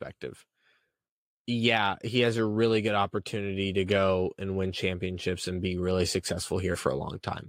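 A short speech recording, and nothing technically wrong turns up anywhere in it, so there's nothing to time or trace back to a cause.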